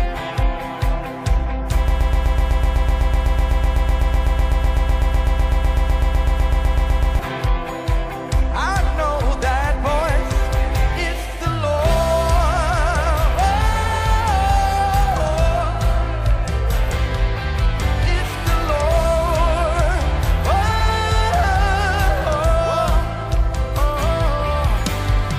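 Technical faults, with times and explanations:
1.88–7.19 s, broken-record loop: a 125 ms fragment repeats exactly, back to back, 42 times, and the audio meant for that span is lost. This is likely a stalled player, encoder or stream resending its last fragment. A spectrogram shows one identical block tiled repeatedly; the waveform looks strictly periodic.
13.73–13.93 s and 20.70–20.89 s, frames out of order: in each stretch, two neighbouring blocks of about 93 ms (consistent with two codec frames each) play in swapped order. That produces a garbled flutter with no time lost. A spectrogram shows abrupt vertical breaks where content jumps backward, then forward again.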